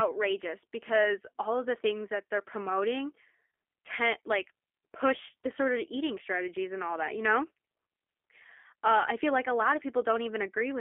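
Speech heard throughout through G.729 coding: narrow 300 Hz to 3.4 kHz band plus rough, synthetic pulse-built texture, fitting 8 kbit/s, unlike a clean band-limit.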